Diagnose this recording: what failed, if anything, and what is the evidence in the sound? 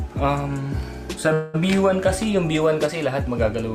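A call audio freeze at 1.33–1.56 s, likely from network delay draining the jitter buffer: a fading concealment buzz fills about 0.2 s, then audio resumes where it stopped, delayed rather than dropping content.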